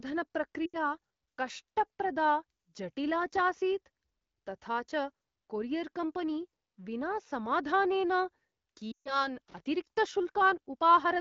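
Speech carried over AMR wideband, whose light coding texture fits roughly 12.65 kbit/s, has lost AMR speech frames at 0.66 to 0.77 s (80 ms) and 8.92 to 9.28 s (140 ms). The decoder stretches the last good sound and fades it, seen as smeared, flattened harmonics dimming toward silence. Loose connector crackle follows at 9.48 to 9.60 s, an intermittent contact chopping the signal into scratchy bursts that show as jagged waveform spikes and vertical broadband streaks.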